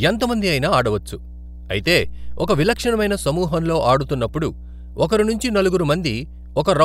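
Speech runs over mains hum from start to finish, a steady 60 Hz tone with some low harmonics, fairly loud under the voice, from a ground loop or nearby transformer. Its fixed pitch and constant level set it apart from irregular, broadband low-frequency rumble.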